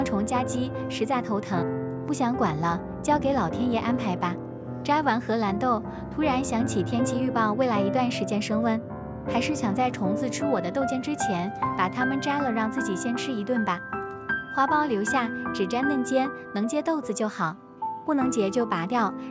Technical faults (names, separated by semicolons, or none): none